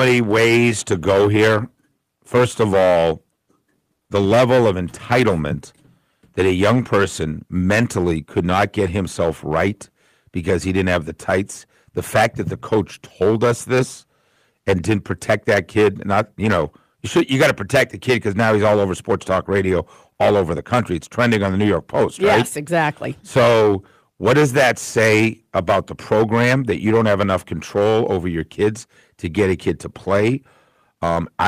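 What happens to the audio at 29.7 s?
At 29.7 s the speech carries a harsh, gritty fuzz on every louder syllable, and this holds for the whole clip rather than only that moment. It is hard clipping: the level was pushed about 16 dB beyond what the stage could pass, so waveform peaks are sliced flat, affecting something like 7 percent of samples. Those squared-off tops generate strong high harmonics, which is why the loud parts sound buzzy and torn rather than clean.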